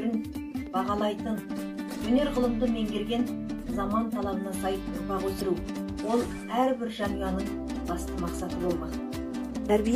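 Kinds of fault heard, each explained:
Damaged data in a compressed stream: part of the encoded stream is corrupt, so the decoder misreads those frames, loses its place and hunts for the next valid frame header before it can carry on. Here that comes through as three short glitchy blips, at 1.32–1.36 s, 5.37–5.42 s and 7.72–7.77 s. Each lasts only about 40 ms, a quick burst of garbage where the decoder stumbled over the damaged data and then recovered.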